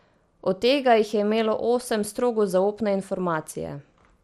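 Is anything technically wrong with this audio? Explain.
Yes. MP2 compression damage runs throughout the speech, from start to finish. The likely cause is MPEG Layer II coding at a low rate, with a bit budget that fits roughly 80 kbps. The coder splits the signal into 32 sub-bands and cannot fund them all, so the highest bands are dropped entirely and nothing remains above 13.6 kHz. The surviving bands are coarsely quantised, giving a dull top end and a clearly audible gurgling, granular roughness.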